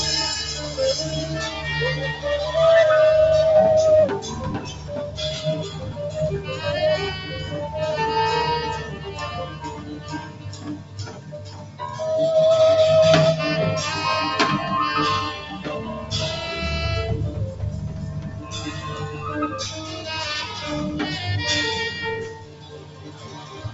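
A noise suppressor made for speech was left on throughout. It treats steady tones and tails as noise, swinging the level by about 15 dB, so the sound pumps and thins. The sound cut by the noise suppressor drops further at 4.61 to 4.91 s (about 7 dB), 5.69 to 5.94 s (about 5 dB), 7.23 to 7.54 s (about 5 dB), 8.82 to 9.12 s (about 7 dB), 9.46 to 11.8 s (about 8 dB), 18.18 to 18.54 s (about 6 dB) and 22.34 to 23.58 s (about 8 dB). In these stretches, held sound sinks and decays are cut short.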